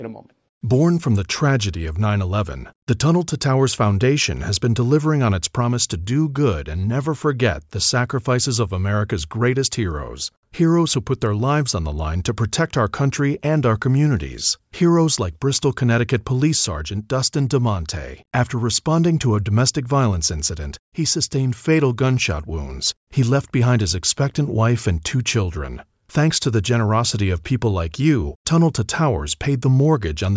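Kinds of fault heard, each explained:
No technical fault can be heard in the recording; the signal stays steady and intact throughout.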